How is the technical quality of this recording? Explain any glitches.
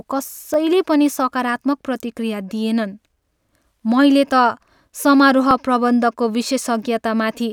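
Two brief repeated-buffer glitches occur, at 0.54 s, just before "पनि सकारात्मक", and at 5.51 s. In each, the playback device did not receive fresh audio in time and played its last 10 ms buffer a second time. Because the repeated piece is only 10 ms long and plays just once more, it registers as a short click or tick with a hard join rather than an audible stutter. Nothing seems to be lost, only briefly duplicated.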